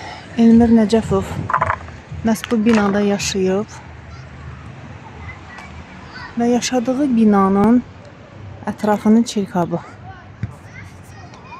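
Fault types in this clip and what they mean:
Dropped buffer (overrun): two small forward jumps in the sound, at 7.64 s and 9.63 s, with no gap of silence. Each is likely a missed buffer overwritten before capture, losing around 10 ms and splicing the edges together.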